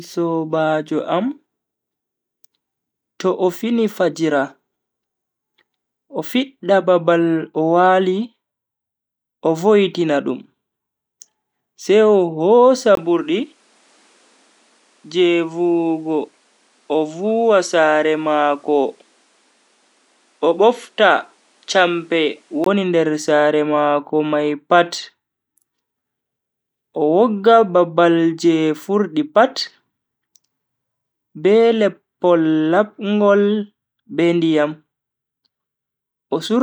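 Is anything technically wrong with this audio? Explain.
Yes. From 12.95 s to 22.66 s, just before "nder sare mako", the speech takes on a different character, consistent with an input switched to a poorer device, likely a change to another microphone mid-recording. A 20 ms gap marks the switch. The replacement path passes nothing above 11.4 kHz, so the top end dulls, and it brings its own faint noise floor well below the speech. Loudness stays roughly unchanged, so the shift is heard in tone rather than level.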